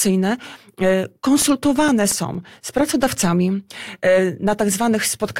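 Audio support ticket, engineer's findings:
CD scratch ticks, 1.19–3.04 s: nine regular ticks, roughly five a second, each only a few ms, of uneven strength. Disc surface damage beating error correction once per revolution, with the player patching or muting the lost samples.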